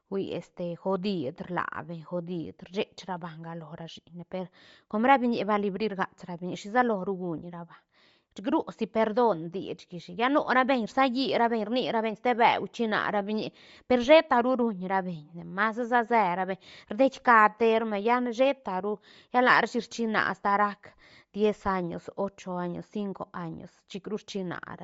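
Across the whole speech clip, the top end sounds grainy and breathy, with noise replacing detail. The cause is likely Bluetooth LC3 compression, fitting 32 kbps and 10 ms frames.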